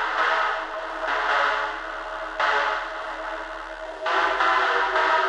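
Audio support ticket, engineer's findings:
Nothing stood out on listening to this recording of sounds.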